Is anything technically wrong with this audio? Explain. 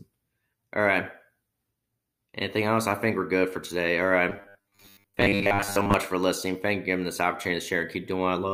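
Yes. From 4.3 to 5.94 s, just before "for listening", there is robotic sound from repeated short buffers. Audio likely arrived too seldom, so a 10 ms slice was looped over most of that stretch, forcing a rigid 100 Hz metallic buzz. A spectrogram shows evenly spaced 100 Hz harmonic stripes, and the waveform shows identical 10 ms cycles.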